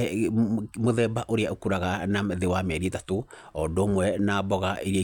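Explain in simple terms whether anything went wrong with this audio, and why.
Nothing went wrong here; no faults can be heard.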